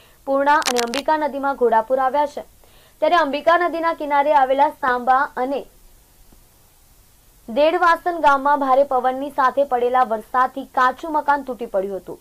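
A worn cable or connector being shifted likely causes the cable scratch noise from 0.62 to 0.99 s. Its contact resistance changes rapidly and injects dense, irregular bursts of noise, heard as a brief scratching rustle sitting roughly 10 dB below the sound.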